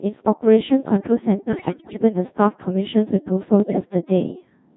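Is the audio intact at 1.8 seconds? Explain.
No. The moment falls inside a burst of bit errors on digital voice radio running from about 1.49 to 2.02 s. At a bit error rate of around 7 percent, corrupted bits in each frame reset its pitch, level, voicing and spectral shape. The sound lurches in pitch and loudness and breaks into bleeps and warbled gibberish. Unlike a dropout, the sound keeps going but turns nonsensical.

Underneath, the whole clip carries heavy Codec 2 vocoder damage. Speech is rebuilt from sine waves using only pitch, voicing, energy and envelope, at a rate near 1.6 kbit/s. The result is steadily robotic and buzzy rather than jumping erratically.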